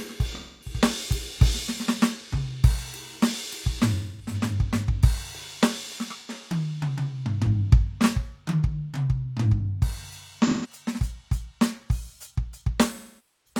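A music clip with AAC frame loss and concealment: the decoder lost runs of frames and patched them from the last good spectrum at 0.33, 3.93, 6.17, 10.46 and 12.90 s, giving smeared, phasey gaps of about 85 to 256 ms, the last fading for 512 ms until the clip ends.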